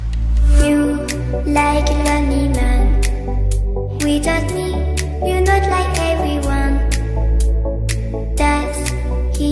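Nothing in the audio stands out as a technical fault; there's nothing here to flag.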